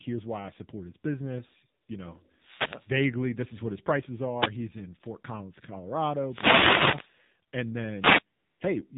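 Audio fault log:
throughout: AMR narrowband mobile codec. The speech passed through AMR-NB at 7.4 kbps, a low rate that which leaves few pulses per subframe to model the voice. The voice sounds buzzy and synthetic, and everything above 4 kHz is missing, so it sounds thin and muffled.
1.82–1.88 s and 8.38–8.60 s: AMR comfort noise. Speech frames stopped for 60 ms and then 220 ms, and the receiver filled the gaps with generated noise. The real background gives way to a smooth, steady hiss that switches in and out abruptly.
2.27–2.97 s, 4.33–4.53 s, 6.21–7.14 s, 7.98–8.23 s: wireless microphone noise hit. The FM radio link faded as reflections cancelled, letting receiver noise rise. Each fade is heard as a swish or burst of static over the voice, with the longest near 2.3 s and 6.2 s.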